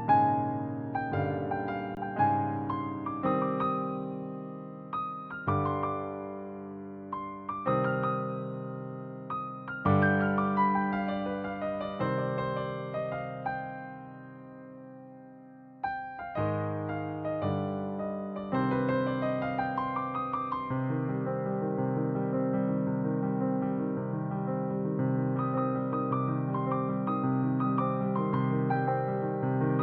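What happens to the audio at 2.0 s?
Just before 2.0 s, from 1.95 to 1.97 s, there is an underrun with held sample. The output buffer ran dry for 20 ms. The converter held its last value, so the waveform sits flat and the sound simply stops. About 20 ms of audio was lost before it resumes.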